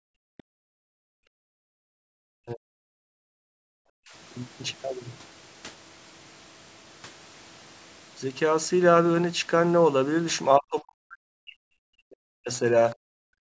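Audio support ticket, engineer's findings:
Room tone vanishing, then returning abruptly. Background gated by the echo canceller at 0.00–2.16 s, 3.07–3.71 s and 12.95–13.09 s, dipping about 40 dB at worst. Mechanism: the echo canceller's suppressor clamps the mic hard while the far-end loudspeaker plays, then releases, so ambience pumps in and out with far-end activity.

Faint second voice in the background at 0.37–0.43 s, about 30 dB under the main talker. This is the other side's voice leaking through, likely residual loudspeaker echo the canceller failed to subtract from the mic. The scrap is brief and inside the gated stretch.

Near-end talker dipping and breaking up in pieces at 2.44–2.79 s, 3.99–4.09 s, 10.57–12.62 s and 13.37–13.50 s, down about 40 dB at the deepest. Speech suppressed in double talk, likely the echo canceller misreading the overlap of both sides as echo and attenuating everything. 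The longest hit is 10.57–12.62 s, about two seconds.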